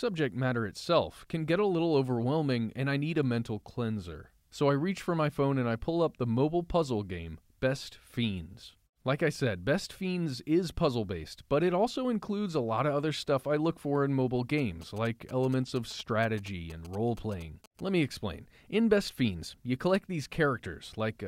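A nearby 2G phone exchanging signalling bursts was picked up and rectified by the audio circuit, producing GSM signalling bursts from 14.58 to 17.80 s, just after "look for in mobile": a galloping dit-dit-dit of short 217 Hz buzzes, roughly 20 dB below the speech.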